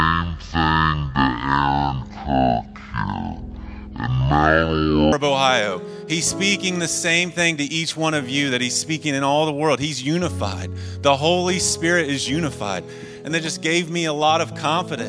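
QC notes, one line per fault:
0.00–5.12 s, wrong sample rate: the opening drags at half speed and sits a full octave low (12 semitones down). The samples are being clocked out at about half their capture rate with no conversion, which fits 44.1 kHz material played at 22 kHz.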